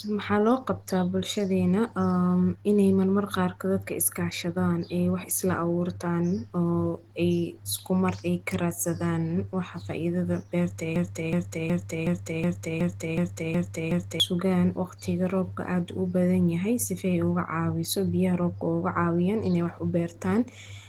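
Right from the start the speech sounds muffled and hoarse, which is likely Opus compression running in its hybrid speech mode at something like 16 kbps. At 10.96 s a broken-record loop kicks in: a 0.37 s fragment repeats back to back until 14.20 s, probably a stalled stream, and the audio in that stretch is lost.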